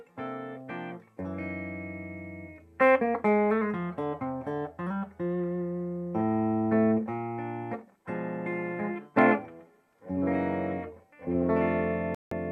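Near the end, from 12.15 to 12.32 s, the sound drops to silence for about 168 ms and then resumes. This is a digital broadcast dropout: the receiver lost valid frames, consistent with several failing their checksum, and muted until clean data returned.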